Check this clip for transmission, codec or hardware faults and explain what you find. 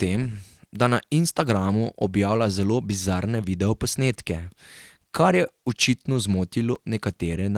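One fault stands out, a brief dropout near the end of the speech, heard against light Opus voice compression that still carries sound up to about 20 kHz.

At 6.75 s there is a sharp tick: a block of digital silence about 5.8 ms long. The output buffer most likely wasn't filled in time, so the sound cut out and back with no fade. The gap's length fits a 256-sample buffer.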